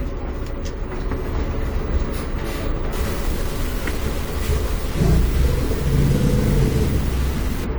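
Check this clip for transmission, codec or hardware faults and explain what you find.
One fault shows up, covering most of the clip. From 2.93 s to 7.64 s the audio turns grainy and harsh, a gritty distortion that rises and falls with the sound itself, with the quietest parts sputtering or dropping out. This is low bit depth without dither. The likely cause is the signal being truncated to about 5 bits with no dither. The rounding error therefore tracks the waveform instead of spreading as smooth hiss, and it sits only roughly 15 dB below the signal.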